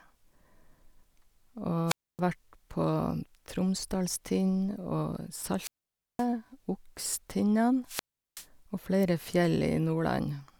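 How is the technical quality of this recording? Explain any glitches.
The speech is interrupted three times by wireless microphone squelch dropouts, at 1.86 to 2.20 s, 5.57 to 6.26 s and 7.85 to 8.47 s. Each time, the transmitter's FM signal weakens until the receiver's squelch gate shuts the output off. Hiss briefly swells, then near-silence lasts 0.27 s, 0.52 s and 0.38 s respectively before the voice returns.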